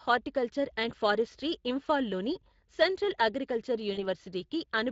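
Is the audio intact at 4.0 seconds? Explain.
No. VoIP packet loss concealed by the speech codec hits at 3.93 to 4.01 s, right after "ఫారెస్ట్రీ ఇంఫాల్లోని సెంట్రల్ అగ్రికల్చరల్". About 40 ms of audio is missing, which fits two 20 ms frames. The decoder fills the gap by repeating its last pitch and filter at falling gain, so the sound smears into a fading buzzy tone or coloured noise and stays weak briefly afterwards.

The whole clip, including this moment, also carries Speex codec damage, which is plainly audible. The sound fits a mid-rate setting near 20 kbps. With too few bits for the excitation, the audio sounds noisy and hoarse.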